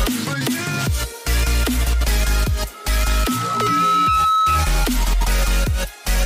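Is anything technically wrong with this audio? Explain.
Yes. From 2.74 s to 4.78 s there is loudspeaker feedback squeal: a microphone is picking up the loudspeaker it drives, and at 1.3 kHz the loop gain rises above one, so that frequency keeps reinforcing itself. It swells over roughly a second into a piercing whistle a few decibels louder than the surrounding sound. Unlike a steady interfering tone or hum, it builds from nothing and grows on its own before stopping.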